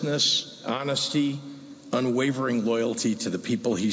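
Nothing goes wrong anywhere in this one, so there's simply no fault to point to.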